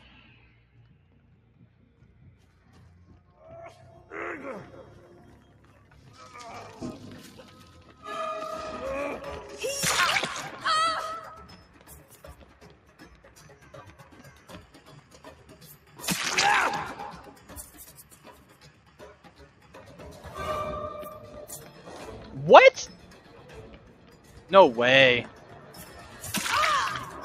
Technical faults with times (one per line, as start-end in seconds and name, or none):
0.00-27.24 noise suppressor applied to music or sounds
0.51-2.68 sound cut by the noise suppressor
11.57-13.30 sound cut by the noise suppressor
14.74-15.46 sound cut by the noise suppressor
15.77-15.94 sound cut by the noise suppressor
18.04-19.74 sound cut by the noise suppressor
23.01-23.29 sound cut by the noise suppressor
23.78-24.50 sound cut by the noise suppressor